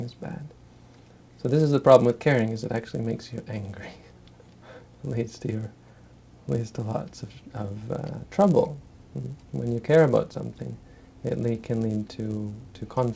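Throughout, the resampler restarts on every block, so each 10 ms block edge carries an error, giving a 100 Hz buzz with signal, visible as evenly spaced vertical lines at 100 Hz intervals on a spectrogram.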